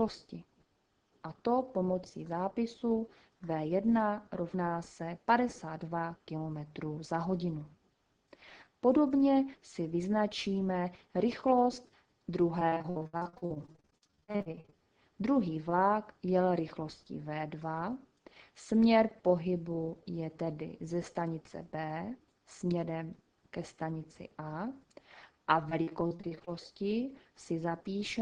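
From 12.59 to 14.74 s and again from 25.70 to 26.49 s, repeated packet loss (robotic sound) breaks the audio into choppy fragments. Dozens of short dropouts, up to 62 ms, are patched by extending the previous sound, which covers nearly half of the first stretch.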